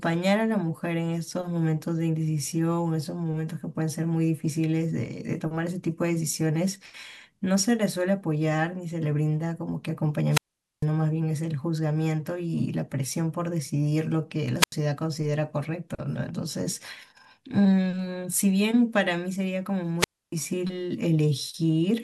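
An analogue FM wireless microphone's radio link fades three times in this speech clip, and each time the receiver's squelch mutes the output: a wireless microphone squelch dropout. Hiss rises, then near-silence lasts about 450 ms at 10.30–10.86 s, 85 ms at 14.57–14.75 s and 285 ms at 19.98–20.34 s.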